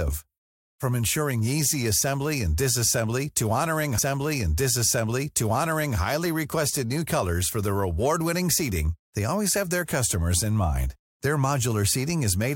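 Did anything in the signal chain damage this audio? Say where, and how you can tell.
Yes. A stream segment repeated at the playback stage. From 3.97 s to 5.97 s, about 2.0 s of speech plays a second time after a small blip at the jump back. The player fetched or queued the same segment twice. Unlike a buffer stutter, the repeat is a whole segment, not a few milliseconds looped.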